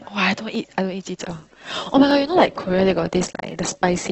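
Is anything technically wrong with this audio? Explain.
Yes, there are two kinds of fault.

At 1.22 s the playback switched to an adaptive stream at a lower bitrate. The connection evidently slowed, so the player changed to a cheaper encoding of the same speech and stayed on it to the end. The sound fits a move from around 64 kbit/s Opus down to about 12 kbit/s. The change is abrupt with no gap: codec artefacts rise, and a smeared, watery codec texture takes over.

At 0.55 s, 2.11 s and 3.51 s there are single sharp clicks, most likely from dropped samples. A tiny slice of the stream, only a fraction of a millisecond, went missing each time, so the waveform jumps straight from one value to a later one. That loss is far too brief to remove any audible speech. Instead, each discontinuity is heard as an isolated tick and shows as a thin vertical line across the spectrum.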